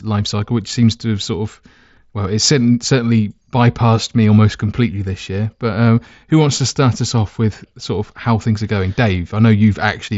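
No technical faults can be heard in this speech, which arrives over a Bluetooth mSBC headset link with nothing above 7.7 kHz.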